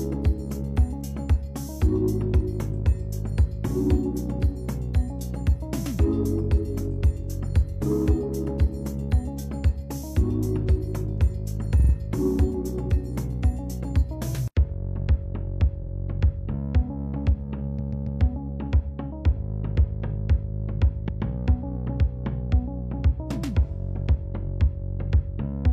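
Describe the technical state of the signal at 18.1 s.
Repeated frames run from 17.74 to 18.16 s: a 139 ms block, which fits a run of about three compressed frames, is played three extra times. This adds 418 ms and is heard as a stutter.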